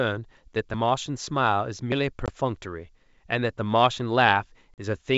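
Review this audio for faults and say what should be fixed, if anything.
At 1.92 s the speech jumps ahead, and around 70 ms of sound is simply missing, with no gap of silence. This is likely a dropped buffer (overrun), where incoming audio was overwritten before the program read it. Servicing the capture buffer promptly, or enlarging it, prevents this.

From 2.26 to 2.30 s there is a hard-edged 20 ms hole, and from 4.74 to 4.79 s a 40 ms one. Each time the speech comes back slightly distorted before settling. This is packet loss on an ADPCM call: roughly one packet, then a couple, went missing, and the decoder's predictor and step size drifted from the sender's. The G.722 wideband coding itself stays clean and clear up to about 7 kHz through these holes. Packet-loss concealment that also resets the ADPCM state, along with a more reliable network path, prevents this.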